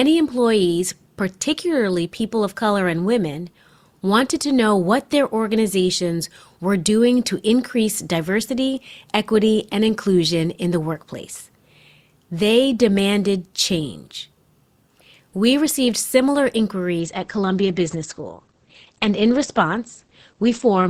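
Speech with an adaptive stream at a lower bitrate from 17.0 s to the end. The quality falls suddenly, with no gap. Nothing remains above 8.5 kHz, and codec artefacts rise. This fits a slowed connection forcing a switch from 64 to 12 kbit/s Opus.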